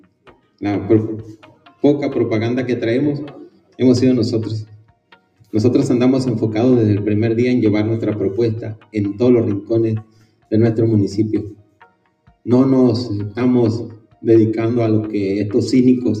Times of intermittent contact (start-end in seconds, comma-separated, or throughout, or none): none